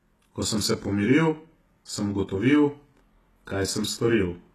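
Throughout the speech, one channel lags the other by roughly 20 ms and the two sum to mono, causing channel delay (comb filtering): closely spaced notches from near 20 Hz upward sound rough or slightly doubled. Also throughout, nothing is present above 12.4 kHz, and the treble sounds rebuilt, with gritty, metallic s sounds. The likely cause is HE-AAC compression at a low bitrate around 16 kbps, with plainly audible spectral band replication damage.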